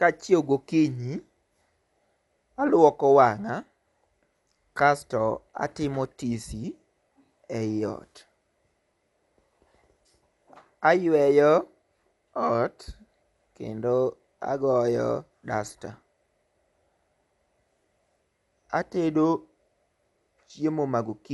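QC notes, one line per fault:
Throughout: likely Dolby Digital compression. The speech sounds dull, with nothing above 11.4 kHz. The damage is plainly audible. The encoder cut the band and gave many frequency lines no mantissa bits. The decoder filled them with noise. This fits a 64 kbps encode.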